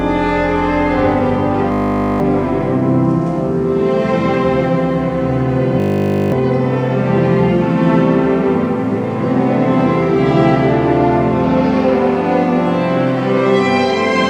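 A system hang loop, a frozen driver replaying a 20 ms buffer, buzzes at 50 Hz at 1.72–2.2 s and 5.8–6.32 s, not silence like a dropout.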